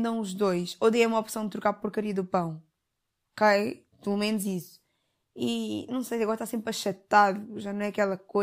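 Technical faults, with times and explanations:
No technical faults can be heard in this recording.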